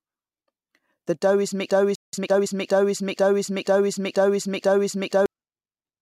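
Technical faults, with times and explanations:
1.70 to 5.26 s, broken-record loop: a fragment about 0.48 s long plays seven times in a row, each pass identical and butted straight against the next, so the sound stutters in place for over three and a half seconds. This is likely a stall in the player, encoder or stream, which kept resending the last piece it held. Whatever should have played during that stretch never arrives and is lost.
2.13 to 2.47 s, time-compressed catch-up: for about a third of a second the audio runs at roughly 1.5 times normal speed yet keeps its normal pitch. The player is trimming a backlog after a stall, cutting out short slices and cross-fading the remaining pieces together. The hurried rhythm comes from the missing slices.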